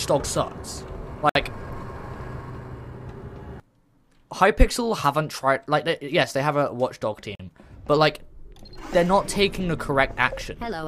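You get two hard-edged dropouts here, a gap between stream segments each time: one from 1.29 to 1.35 s, about 60 ms of silence, and another from 7.35 to 7.40 s, about 42 ms. They sit 6 seconds apart, which lines up with a 6-second segment length. The timestamps at those boundaries don't quite meet, so the player pads the hole with silence. Nothing is actually missing; the audio just gets pushed later.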